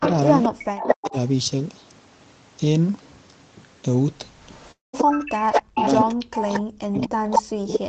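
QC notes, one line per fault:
0.00–1.15 s, 4.50–6.60 s and 6.97–7.89 s, echo leak: a delayed copy trails the talker by 224 ms, about 5 dB down, reaching equal level at the end, likely from incomplete echo cancellation.
0.49–1.15 s, 5.31–6.16 s and 6.56–7.83 s, speech suppressed in double talk: the talker dips and drops out by up to about 40 dB, likely from the echo canceller muting overlapping talk.
4.71–4.95 s, long network dropout: a fill of about 0.2 s fades from a buzz or hiss into roughly 0.16 s of silence before the audio resumes with that stretch lost, likely from packets never arriving.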